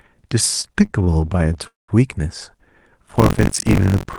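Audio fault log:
0.61–1.67 s, repeated stalls (stutter): the speech keeps catching and dragging, with 21 short holds, none longer than about 29 ms, where the last sound is stretched to cover for packets arriving late. Together they fill about 281 ms, over a quarter of the span, yet nothing is lost. Unlike a single freeze, this is a rapid run of tiny hitches, heard as a halting, uneven rhythm rather than one clear break.
1.67–1.90 s, call audio freeze: one continuous hold of about 210 ms, where the last sound carries on briefly as a fading buzz and then drops to near silence for roughly 170 ms before the speech resumes exactly where it stopped. The likely cause is packets held up in transit emptying the jitter buffer. What separates it from the stutter before it is a single long gap with a fade, not many brief catches.
3.05–4.19 s, buffer tearing: a steady robotic rattle at about 47 Hz runs to the end, present only under the speech. 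The writer and reader of the playback buffer have drifted so that they cross once per period, which fits a 1024-sample buffer, and roughly a fifth of each period is audio from about 40 ms earlier, hard-spliced on both sides. Unlike a stall, nothing stops. The sound keeps moving but is chopped into a regular buzz.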